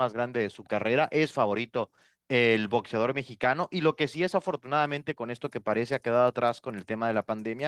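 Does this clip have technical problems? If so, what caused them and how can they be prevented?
No, there's nothing wrong to hear in this one, so there's no cause to chase down and nothing that needs preventing.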